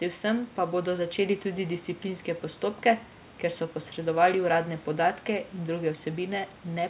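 No technical faults are audible.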